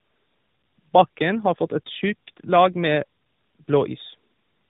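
Throughout the speech, tandem speech coding degrades the sound. The call appears to pass through a narrowband mobile codec twice, with a plain telephone link between them. That fits AMR-NB at around 10.2 and 12.2 kbit/s either side of G.711. Each coder re-encodes the previous one's output, so the errors stack up. Nothing reaches above 3.8 kHz, so the speech sounds muffled. It also sounds rough and grainy, with a warble.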